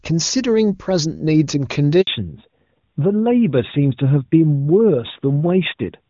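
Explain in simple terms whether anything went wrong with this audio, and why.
Two things go wrong, both just after the 2-second mark.

At 2.01 s there is a handover gap. The phone switches the call from one network to another, and for about 60 ms, until 2.07 s, no sound data arrives. The speech fades out into silence, and whatever was said in that brief window is lost. The gap is short.

From 2.07 s to the end, the call has a fallback to narrowband. Up to the handover the speech is carried by the HD Voice codec and sounds clear, with crisp detail. After the switch the new link uses an older telephone-quality codec that keeps nothing above 4 kHz. The hiss of s sounds and the airy top end disappear, so the remaining speech sounds duller, more muffled and rougher, like a traditional phone line.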